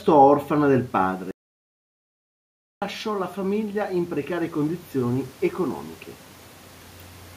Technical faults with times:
0.97-5.86 automatic gain rising
1.31-2.82 audio dropout to silence

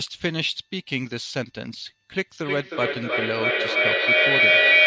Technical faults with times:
2.22-4.87 feedback echo between two devices

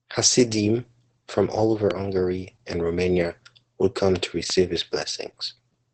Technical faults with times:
0.00-5.94 Opus voice compression

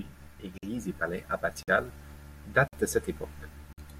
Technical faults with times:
0.58-0.63 gap between chunks
1.63-1.68 gap between chunks
2.68-2.73 gap between chunks
3.73-3.78 gap between chunks

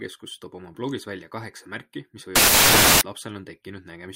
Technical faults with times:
2.36-3.01 samples built from the wrong bytes

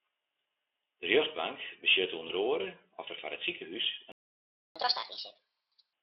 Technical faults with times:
2.27-2.31 VoIP packet loss concealed by the speech codec
3.81-3.85 VoIP packet loss concealed by the speech codec
4.12-4.76 playback stall
4.76-5.93 catch-up at higher speed

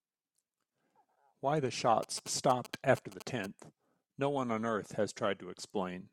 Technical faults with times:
2.03-3.46 GSM signalling bursts
3.10-3.20 one channel drops out

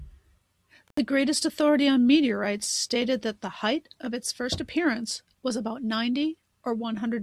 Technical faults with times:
0.88-0.99 intermittent contact

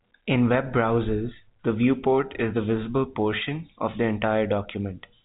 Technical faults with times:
none

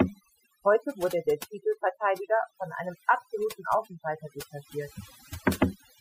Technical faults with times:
0.00-6.00 overdone noise removal

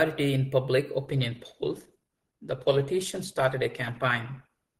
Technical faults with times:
1.05-4.79 adaptive stream at a lower bitrate

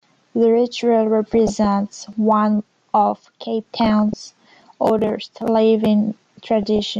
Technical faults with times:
0.00-6.99 MP2 compression
1.31-1.66 DAB burbling
2.13 audio missing between chunks
3.81-4.14 DAB burbling
4.62 audio missing between chunks
6.63-6.79 DAB burbling

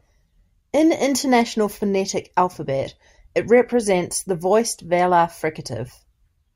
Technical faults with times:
none

